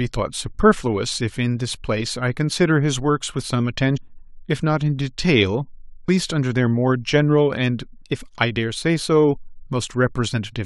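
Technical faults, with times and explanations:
3.96–3.98 s and 6.07 s, compressed frames skipped: the decoder never plays a run of compressed frames, either missing or rejected as damaged, about fifteen at the first point and about seven at the second, with frames of about 23.2 ms. The speech jumps ahead roughly 0.3 s and then 0.15 s.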